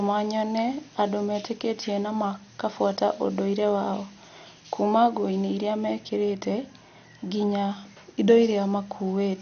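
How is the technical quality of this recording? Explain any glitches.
The quality is poor, with one fault running through the whole clip. The speech sounds dull and gritty from start to finish. Nothing is heard above 6.5 kHz. The likely cause is MP2 compression at a low bitrate, and the damage fits something near 48 kbps. MPEG Layer II divides the sound into 32 sub-bands and shares out bits among them. Starved of bits, it shuts off the top bands entirely. The bands left are quantised coarsely and flicker in and out. That produces the gurgling, granular texture under the speech.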